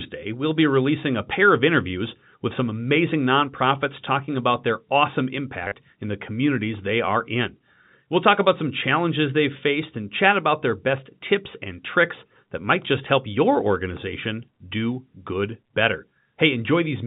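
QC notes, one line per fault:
5.66–5.74 s, packet loss with last packet repeated: between "talking about their awesome" and "in the communities they" the sound briefly stutters robotically with a 100 Hz buzz. About 60 ms was lost across 80 ms, longest run 40 ms, consistent with 10 ms packets. Each lost packet was replaced by a replay of the previous one.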